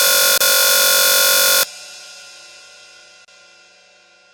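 Right from the start, already under way when the clip begins and lasting to 1.63 s, there's a system hang loop. The machine or driver froze while the sound hardware kept replaying one 21.33 ms chunk, 74 times in all. That gives a steady buzz at about 46.9 Hz, which fits a 1024-sample buffer. At 0.38 to 0.41 s, inside that buzz, comes the first gap at a join of encoded pieces, a 29.5 ms silence with smeared edges. A second one opens at 3.25 to 3.28 s, lasting 31.3 ms, before the sound picks up where it left off. Both are encoder start-up delay and last-frame padding left in where separately encoded pieces were joined without trimming.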